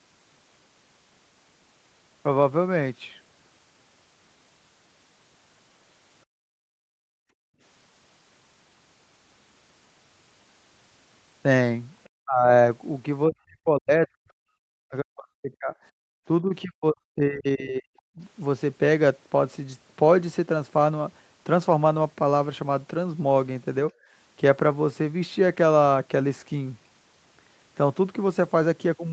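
It's a speech recording that went over a call, and the echo canceller is causing most of the trouble. There's background gated by the echo canceller at 6.26 to 7.61 s, 16.03 to 16.13 s and 23.93 to 24.12 s. The room tone gets pulled down by about 35 dB in the first two and about 18 dB in the last, then snaps back once the canceller releases. At 12.04 to 12.09 s a very faint scrap of sound slips in, most likely the other side's voice leaking through because the canceller didn't fully scrub the loudspeaker signal from the mic. Right after that, the talker's speech is suppressed in double talk at 12.22 to 12.5 s, 13.27 to 14.31 s, 14.88 to 15.75 s and 16.41 to 18.2 s. In each stretch the voice dips very deeply or chops out in pieces, likely the signature of a canceller that can't tell its own talker from the far end's echo and ducks both. All of this sits on the usual call band limit, with nothing above 8 kHz.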